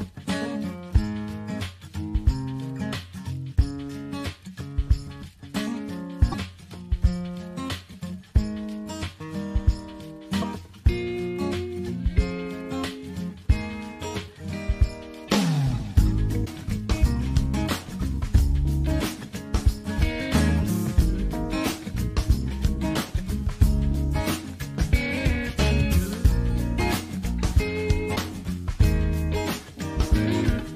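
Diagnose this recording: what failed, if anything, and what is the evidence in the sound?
The likely failure is at the codec stage: a broken MP3 bit reservoir after frames were lost from the stream. Decoding resumes with frames whose borrowed bits point back into missing data, so the decoder assembles garbage before it resynchronises. Each disturbance is a short jump with a roughly 30 ms chirp, burst of noise or short hole at 6.31–6.34 s, 10.41–10.44 s, 15.27–15.30 s, 16.45–16.48 s and 28.15–28.18 s, which fits about one 26 ms MP3 frame each time.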